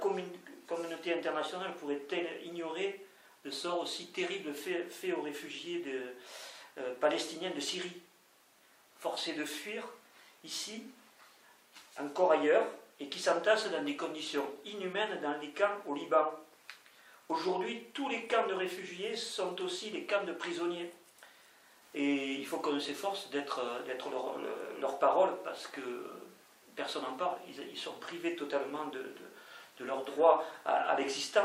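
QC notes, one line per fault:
Nothing to flag here, since no technical faults turned up anywhere in this audio.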